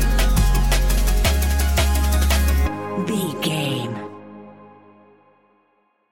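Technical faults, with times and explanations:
No technical faults detected.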